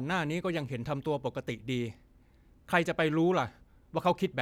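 Listening to this speech recording, nothing stood out as a technical problem.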